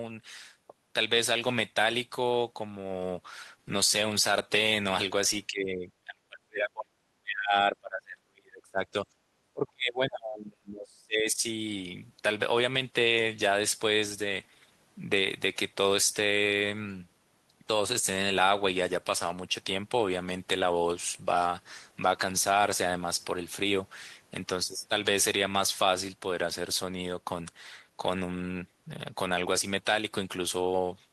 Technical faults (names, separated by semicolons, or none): speech suppressed in double talk